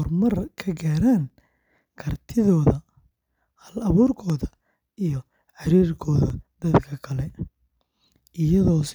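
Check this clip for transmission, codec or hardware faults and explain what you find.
One fault is present: periodic USB or driver dropouts. From 0.30 s to 8.31 s, roughly every second, a couple of milliseconds of speech drop to silence. A background task stalls the audio path at a fixed interval. Each gap sounds like a regular tick.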